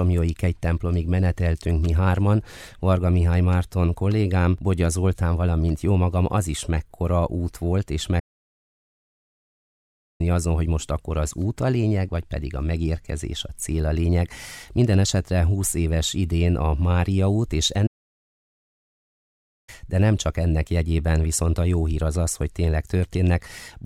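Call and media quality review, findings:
Playback stall at 8.19 s and again at 17.86 s. Output cuts to silence mid-flow for 2.0 s (to 10.21 s) and 1.8 s (to 19.69 s), then audio resumes. Likely cause: player buffer underrun or blocked playback thread starving the output until data delivery recovered. Two separate stalls suggest a recurring supply problem rather than a one-off event.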